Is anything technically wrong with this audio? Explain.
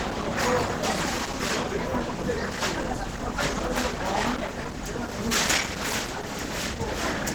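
Yes. Throughout, likely Opus compression at a low rate in hybrid mode, which fits about 16 kbps, starves the bands, so these everyday sounds turn hoarse, grainy and noisy.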